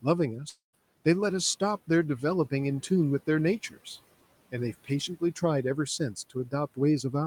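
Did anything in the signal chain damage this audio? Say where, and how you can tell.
Yes, at the network stage, likely a long network dropout. From 0.49 to 0.76 s, about 240 ms is lost: the last sound is stretched into a fading buzz, then 140 ms of silence.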